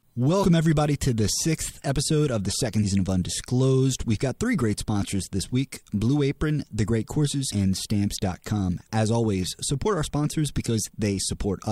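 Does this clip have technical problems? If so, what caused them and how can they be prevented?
Yes. Between 0.43 and 0.46 s the sound lurches forward. This is compressed frames skipped: a few frames, roughly 70 ms of audio, were never decoded, which fits 20 ms codec frames. Prevent it by verifying file integrity and using error-resilient transport with retransmission or checksums.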